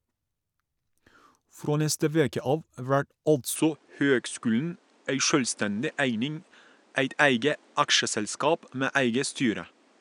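Speech recording; from 3.56 s to the end the sound loses everything above 10.5 kHz and gains a faint new noise floor, likely an input switched to a poorer device.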